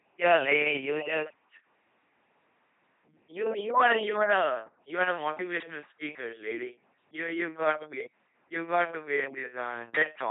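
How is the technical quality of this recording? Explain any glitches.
The quality is poor: the speech has been squeezed through a very low-rate vocoder for the whole clip.

LPC-10 vocoder, throughout: the sound is heavily damaged, consistent with a rate around 2.4 kbit/s. Each moment is rebuilt from a ten-pole vocal tract filter driven by either a buzz pulse train or noise, so speech turns mechanical and robotic, with stray buzzes and hiss, and nothing above 3.8 kHz.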